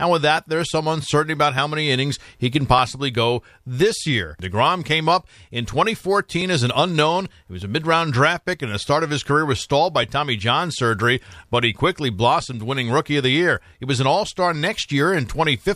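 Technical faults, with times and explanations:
0.37 to 14.86 s, clock drift buffer slips: device clocks likely about 1000 ppm apart force the buffer to drop or repeat small blocks, giving about 15 clicks every 1.21 s.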